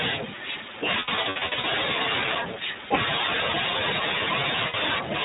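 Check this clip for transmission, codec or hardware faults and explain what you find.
Yes, there are faults: speech coded through the iLBC codec, and two bursts of lost iLBC frames.

Throughout, the speech sounds narrowband, muffled above 4 kHz, and plainly rough and slightly synthetic. This is the iLBC codec, which codes each frame's excitation on its own, stripping the upper band. The sound fits its 15.2 kbps mode with 20 ms frames.

From 1.00 to 1.65 s, the speech turns into brief held, buzzy or breathy vowel sounds. About 400 ms goes missing across that stretch, with no single dropout much longer than a tenth of a second. These are lost iLBC frames. The decoder covers each gap by repeating the last pitch cycle mixed with noise. The speech recovers almost immediately after each one, because every frame decodes independently.

From 4.68 to 4.75 s, a single 60 ms loss of iLBC frames produces the same short, smeared, vowel-like hold before the speech returns cleanly.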